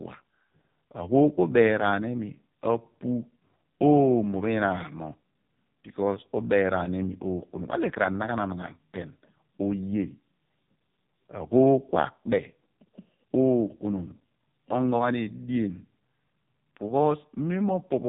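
From start to finish, the speech carries the sound of the AMR narrowband mobile codec, heavily damaged. Nothing passes above about 3.8 kHz, so the top end is gone. The buzzy, synthetic tone points to a very low bitrate, close to 5 kbps. At that rate the codec has very few pulses to drive its vocal-tract model in each short slice of a frame. Detail is lost, and the voice sounds thin and robotic throughout.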